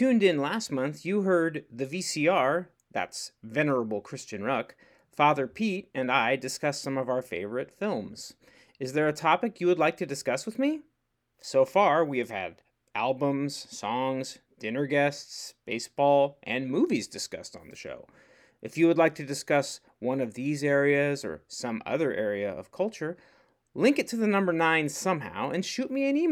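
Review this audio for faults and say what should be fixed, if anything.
No faults found in the speech recording, so nothing needs fixing.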